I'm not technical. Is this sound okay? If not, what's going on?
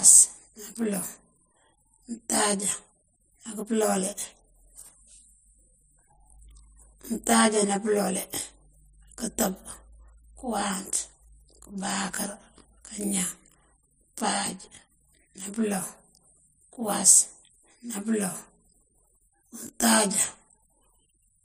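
No. Throughout the whole clip, the speech has a channel delay (comb filtering) fault. One side of the recording arrives about 20 milliseconds later than the other, and when the two sides are mixed into one, they partly cancel at a regular series of pitches, spaced closely from the very bottom of the range upward. The result is a rough, slightly doubled sound.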